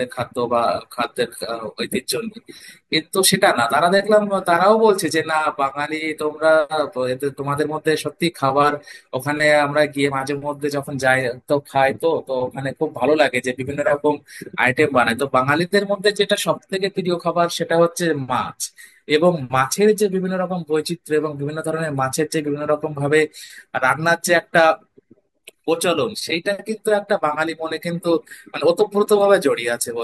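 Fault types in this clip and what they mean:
Nothing in this speech recording stands out as a technical fault. There is no fault type to list for it.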